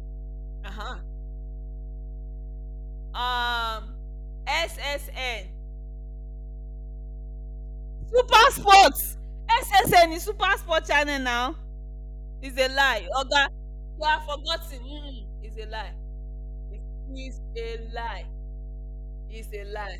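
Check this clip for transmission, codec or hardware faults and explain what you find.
There's one hardware fault here. Mains hum runs under the whole speech clip: a steady 50 Hz drone from a ground loop or nearby transformer, sitting only around 15 dB below the talker.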